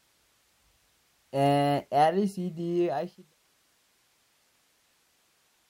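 No technical faults are audible.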